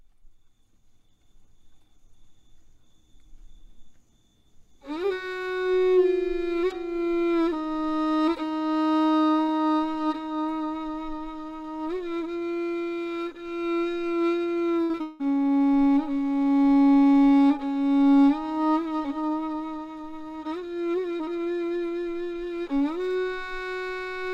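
From 14.83 to 15.21 s there is repeated packet loss with a robotic sound. Several holes, the longest 182 ms, are patched by stretching earlier sound. The result is choppy, with pieces missing.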